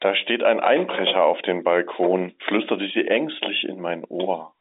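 Nothing goes wrong anywhere in this speech; it simply carries the usual narrow telephone sound of G.711 coding, with the band running from about 200 Hz up to 3.7 kHz and nothing above 3.8 kHz.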